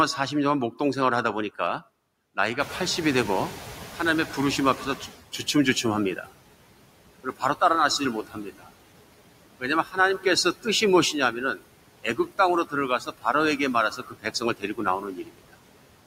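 A speech recording with noise suppressor artifacts throughout: the suppressor pulls down the bands it judges to be steady noise by about 18 dB, so the background drops away in pauses and comes back up under the talker. The room noise itself steps up by about 18 dB at roughly 2.5 s and then sits about 15 dB below the speech. That rise is where the noise suppressor catching up becomes audible. From 2.59 s to 5.16 s the louder background leaks through with only about 12 dB of reduction and then sinks as the noise estimate adapts, a lag of about 2.6 s before the suppression settles. After that, speech is cut by the noise suppressor in seven places: 6.16–6.3 s, 7.24–7.61 s, 7.99–8.69 s, 9.59–10.66 s, 11.13–11.63 s, 12.03–13.25 s and 13.91–15.55 s. In each span the suppressor mistakes parts of the speech for noise and turns them down with the background, by about 11 dB at the first and up to about 19 dB at the last. 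The affected parts of the speech sound swallowed or faint, adding up to around a tenth of a second in the shorter spans and close to three quarters of a second in the final one.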